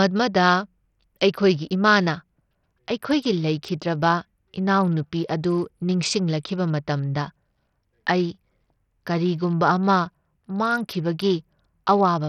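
From start to finish the speech sounds gritty, with flickering treble and nothing above 14.2 kHz. That's likely heavy Bluetooth SBC compression, at a bitrate that points to around 64 kbps.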